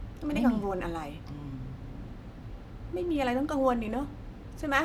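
Nothing in this speech recording stood out as a technical problem on listening.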